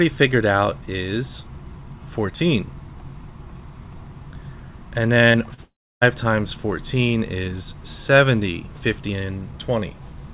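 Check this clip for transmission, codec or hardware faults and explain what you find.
Two kinds of transmission fault show up, clustered between 5.28 and 6.03 s, over a narrowband call path whose cut-off near 4 kHz fits G.711 mu-law coding.

Short concealed packet loss occurs at 5.28 to 5.32 s, 5.32 to 5.36 s and 5.54 to 5.60 s. Audio arrived too late or not at all, so the receiver extended the preceding sound and blended back in. Each gap, about 20 to 40 ms, is heard as a brief smear or wobble.

A long network dropout runs from 5.64 to 6.03 s, most likely a stall in packet delivery. The last sound is stretched into a fading buzz or hiss, then about 300 ms of silence follows before the audio resumes. Roughly 0.4 s of the original is simply missing.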